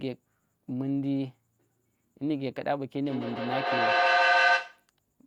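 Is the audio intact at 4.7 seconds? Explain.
No. From 3.02 to 4.89 s there is feedback echo between two devices: two devices on the same call sit in one room, one plays back what the other's microphone sent, and that microphone picks it up again, which neither echo canceller removes. At 4.7 s the speech returns roughly every 150 ms, each pass thinner and more ringing, and the repeats build up rather than fading, peaking at about 7 dB above the speech.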